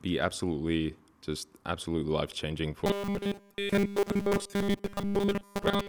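From 2.86 s, right after "just absolutely life changing", and continuing to the end, the speech turns into a robotic sound from repeated short buffers: a rigid, metallic buzz locked at 200 Hz that still roughly follows the words. The likely cause is audio arriving too seldom, so a 5 ms chunk is looped over and over, replacing most of the real signal. Unlike a comb-filter or flanging colour, the buzz rate stays fixed regardless of how the speech moves.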